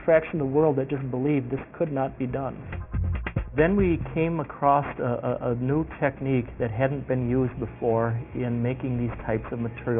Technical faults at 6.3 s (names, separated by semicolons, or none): aliasing